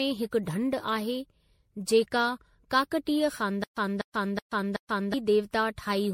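Generation loss runs through the whole speech clip. The sound is swirly and hollow, with a smeared texture. Consonant attacks blur rather than snap. Nothing is present above 16.5 kHz. The damage is heavier than a single lossy pass would leave. The likely cause is repeated MP3 decoding and re-encoding, about seven times over. Each pass quantised on a shifted frame grid, so noise and spectral holes piled up. This fits a 64 kbit/s MP3 chain.

From 3.64 s to 5.14 s there is a stutter with silent gaps. A 246 ms fragment plays, then 129 ms of digital silence follows. The cycle repeats every 375 ms, four times. It sounds mechanical and evenly paced. The likely cause is a player or stream stalling and replaying its last buffered piece at each retry before running dry. The audio that belonged in that span is lost.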